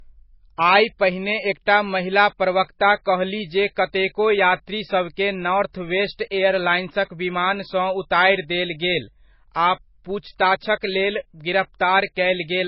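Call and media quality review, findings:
Low-bitrate audio saved at a high bitrate, throughout: dull speech, nothing above 5.5 kHz, smeary MP3 artefacts. Likely a very low-rate MP3 re-encoded high, which restores nothing.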